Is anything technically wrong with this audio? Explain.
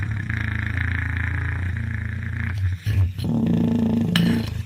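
No, nothing technically wrong can be heard in this recording of sounds. Every part of it comes across intact and steady.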